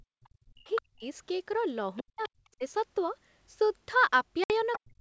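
The echo canceller clamped the microphone right at the start, so from 0.00 to 0.23 s the background is gated by the echo canceller. The room tone drops by about 36 dB for roughly a fifth of a second, then returns.

A second voice then appears underneath the speech at 0.24 to 0.29 s, 0.75 to 0.82 s, 1.96 to 2.29 s and 4.72 to 4.79 s. This is likely the other side's voice leaking through, with the canceller leaving some of the far-end loudspeaker in the signal. The first scrap is very faint, the one at 1.96 s is moderately quiet, and those at 0.75 s and 4.72 s come through only slightly below the main speech.

Overlapping those leaks, the main speech dips hard, by something like 40 dB, from 0.51 to 1.05 s, 2.02 to 2.63 s and 4.78 s to the end. This is likely speech suppressed in double talk, the canceller ducking everything while both sides spoke. The voice thins and cuts out in pieces.

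At 4.44 to 4.52 s, packet loss on an ADPCM call leaves a hard-edged 60 ms hole, which fits a few lost packets. The decoder's predictor has lost track, so the speech resumes with brief distortion before settling.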